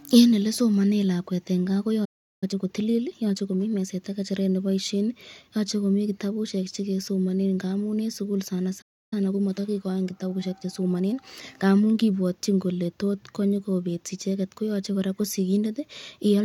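A speech clip with two playback stalls, each followed by time-compressed catch-up. After "lakwet en kaa" the sound cuts out from 2.05 to 2.44 s (about 0.37 s), and again from 8.81 to 9.13 s (about 0.3 s), likely because the player ran dry or was blocked. Unlike a brief dropout, these silences last long enough to notice, and the speech resumes where it stopped. Each stall is followed by hurried speech at unchanged pitch: about 1.25× from 2.44 to 3.92 s, ending before "am ng'echeret neboishen yoche", and about 1.1× from 9.13 to 12.13 s after "ng'amun en sukul sana". The steady pitch is what separates this catch-up from a simple speed-up.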